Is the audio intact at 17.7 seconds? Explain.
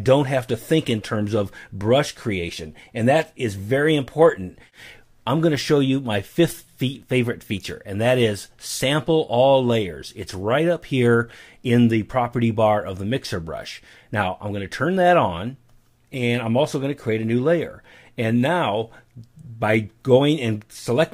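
Yes, the audio is intact at 17.7 seconds, with no fault audible at that moment.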